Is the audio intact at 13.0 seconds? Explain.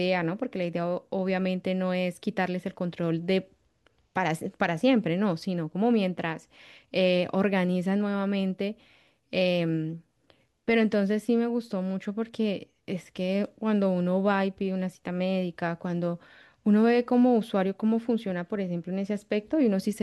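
Yes, at 13.0 seconds the speech plays through cleanly, with no dropout, click, distortion or other fault to be heard at that moment.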